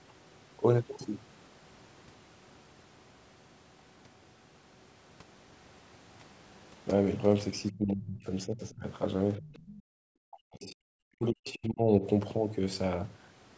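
From 7.71 to 8.86 s the speech sinks, dropping by roughly 25 dB at its deepest, with about a second affected in all. This is speech suppressed in double talk. Both ends were talking at once, and the echo canceller likely could not tell the local talker from the loudspeaker echo, so it pulled the whole microphone signal down.

Near the end of that stretch, from 8.71 to 8.75 s, a faint scrap of a second voice slips through, far below the speech at roughly 35 dB down. It returns more plainly from 9.35 to 9.76 s at about 25 dB down, and again briefly from 11.48 to 11.53 s at a similar level. This is the other side's voice leaking through. It is likely residual loudspeaker echo that the canceller failed to remove from the microphone signal.

From 9.76 to 10.0 s the room sound behind the talker falls away by about 40 dB for roughly a fifth of a second, then comes back. This is background gated by the echo canceller. 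While the loudspeaker was playing, the canceller clamped the microphone hard, and then it let go.

From 10.28 to 12.03 s the speech is suppressed in double talk again, and more heavily this time. It dips by as much as about 40 dB, with around one and a half seconds affected in total. Again the canceller likely treated the overlapping talk as echo and turned it down.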